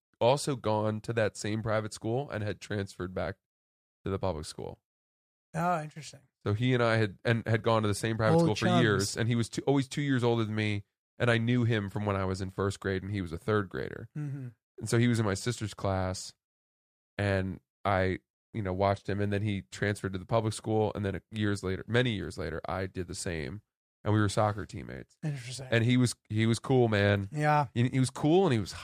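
Nothing in the speech stood out as a technical fault on listening.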